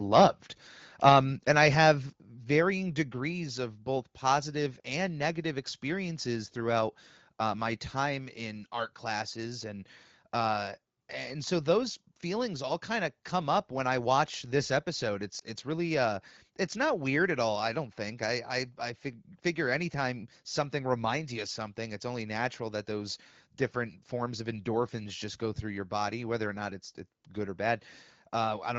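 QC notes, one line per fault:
0.15–0.25 s, microphone overload: The input gain was likely set too high, so the loudest peaks drove the converter past full scale by about 4 dB and their tops were sheared flat. A small but real share of samples in this span sit pinned at the limit, and those squared-off waveform tops add a harsh, crackling grit to the opening peaks that no later processing can remove.
2.1 s, microphone volume stepped down: The call software, likely reacting to the overloaded start, cut the device's input gain in a single move of about 5 dB. Because the change lands as one step rather than a gradual ramp, the speech and the background noise floor both drop together at this instant. That gives an abrupt, audible fall in level instead of a smooth adjustment.
15.39–15.44 s, lost AMR speech frames: A speech frame in the AMR wideband stream failed its checks, and the decoder filled the gap by reusing the previous frame's pitch and vocal tract settings at reduced gain. 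The gap fits a single 20 ms frame. The result is a brief dip or warble rather than a drawn-out fade, and the voice comes back weak or rough for a moment.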